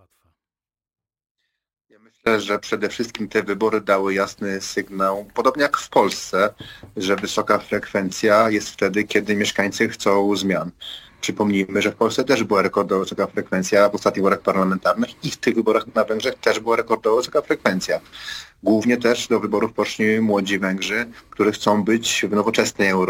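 A break in the signal path, likely a connection or stream that had lost the wanted signal while the chain after it stayed live, is already under way as the clip begins. From 0.0 to 2.26 s this audio dropout to a faint residue leaves only a weak leak of the sound, roughly 35 dB below its normal level. At 2.26 s the full signal returns abruptly, with no fade-in.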